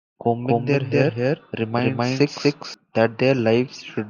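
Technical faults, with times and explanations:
0.44–2.74 s, doubled audio track: the speech is heard twice at once, with a second full-band copy trailing the first by around 300 ms and about as loud as the original. The copy carries no decay or room colour, so it sounds like a clean overlapping repeat rather than an echo, and it cuts in and out abruptly at both ends. The likely cause is the same signal reaching the mix a second time through a slower path.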